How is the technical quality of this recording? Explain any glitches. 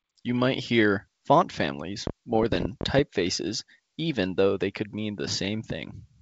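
The recording has two overlapping glitches in the middle, both on a G.722 wideband telephone link whose clean, faintly hissy top end fits full 64 kbit/s coding.

From 2.07 to 3.00 s there is a train of clicks: about ten sharp, near-identical ticks at an uneven 11 per second, well above the sound, likely from electrical interference.

From 2.32 to 2.40 s, bit errors on an ADPCM link disturb the decoder's step size and predictor, producing rough, ringing bursts with level jumps rather than clean, uniform clicks.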